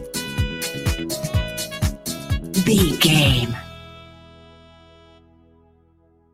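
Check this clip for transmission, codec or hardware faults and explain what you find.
One fault runs through the whole clip, and a second, deeper loss comes near the end.

Noise suppressor applied to music or sounds, throughout: a suppressor tuned for speech was left active, and it treats sustained tones, ambience and reverberant tails as if they were background noise. Its gain keeps shifting as it decides what to remove, with swings of around 10 dB. Onsets slip through, but anything held or decaying is pulled down, so the audio pumps and flutters and sounds thin and dry.

Sound cut by the noise suppressor, from 3.83 s to the end: here the suppressor classifies the material as noise and attenuates it more heavily than elsewhere, by about 6 dB at the deepest point. The sustained and fading parts of this stretch sink and their decays are cut short, while any sharp transients keep more of their level. 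This leaves the close of the clip sounding hollowed out.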